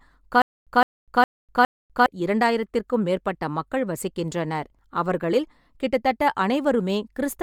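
The speech has likely been passed through Bluetooth LC3 compression, the transform codec of Bluetooth LE Audio, working in what sounds like 10 ms frames at a rate in the region of 48 kbps. With too few bits for the whole spectrum, the codec discards upper-band detail and substitutes shaped noise. The damage is plainly audible throughout: the voice carries a grainy, breathy edge, though content still reaches up to about 20.2 kHz.

From 0.42 s to 2.06 s, playback likely stalls repeatedly, and at each retry the player replays the last fragment before running empty, producing a stutter with silent gaps. A 162 ms burst of sound repeats 4 times at an even 410 ms pace, each separated by about 248 ms of dead digital silence. The audio due in that stretch is lost, and normal speech resumes with "இரண்டாயிரத்திற்கும் மேற்பட்ட மக்கள் வசிக்கின்றனர்".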